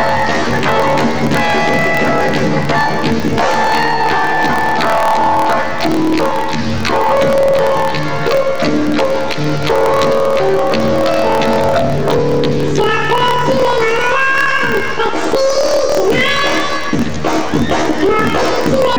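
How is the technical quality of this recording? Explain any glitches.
The quality is poor. Planar audio read as interleaved runs throughout. Each 26.12 ms block plays twice at double speed, so the sound is an octave high, with a robotic buzz at 38.3 Hz.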